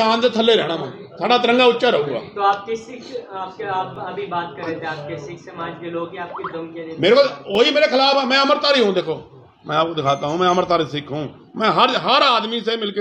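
At 3.95 s and 7.55 s, a block of digital silence replaces the sound with zeros for 2.0 and 2.5 ms. Both edges are hard, with no fade, so each gap is heard as a single sharp tick rather than the softer, audible hole of a longer dropout.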